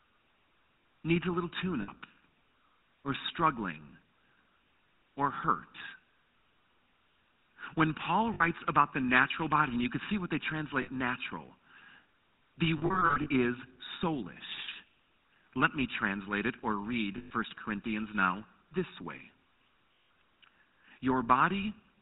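Throughout, the GSM full-rate codec gives the speech a buzzy, gravelly roughness. On a spectrogram everything stops sharply at 4 kHz, and the harmonics show a coarse pulse texture consistent with a 13 kbps stream.

Lost GSM frames interrupt the speech at 1.82 s just after "needs a little tune", at 8.34 s just before "about the natural body", and at 10.82 s, each about 60 ms. From 12.78 to 13.28 s, short dropouts totalling 260 ms are scattered over nearly half a second, just before "is soulish". Further losses of 120 ms at 17.18 s and 160 ms at 19.94 s follow. In each gap the last good frame is repeated, so the sound hangs as a rough, metallic ring. A spectrogram shows smeared, static bands, and the waveform shows a repetitive envelope.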